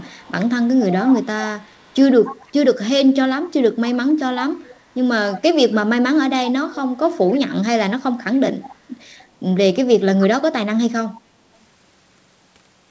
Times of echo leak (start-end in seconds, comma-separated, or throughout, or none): 0.00-2.88, 3.47-5.74, 6.47-7.55, 8.38-9.25, 11.13-11.21